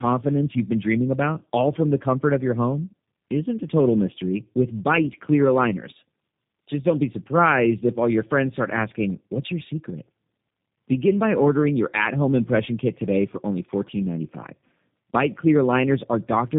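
Tandem speech coding runs through the whole clip: the speech sounds like it passed through two low-rate speech codecs in a row, likely an AMR-NB stage and then G.729A. The second coder re-encodes the first's degraded output, compounding roughness and warble, with nothing above 3.7 kHz.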